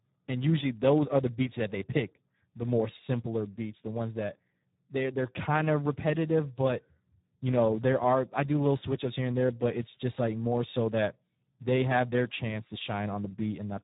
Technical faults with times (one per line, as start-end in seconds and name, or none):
0.00-13.84 Speex codec